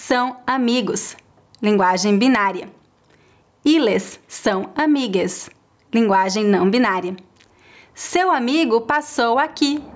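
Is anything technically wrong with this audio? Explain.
Yes. Gain pumping runs through the whole speech clip. The gain swings by around 10 dB. Loud and soft parts sound squashed together. The likely cause is excessive microphone gain, with a fast limiter pulling it down on each peak.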